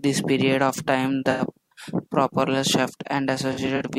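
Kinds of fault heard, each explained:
AAC frame loss with concealment: the decoder patches missing frames from the last good spectrum, so the speech turns smeared and noisy instead of cutting to silence as a plain dropout would. There is an 85 ms patch at 1.31 s, then brief patches scattered over 3.52–3.82 s.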